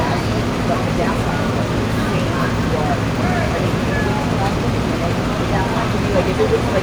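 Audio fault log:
No faults detected in this recording.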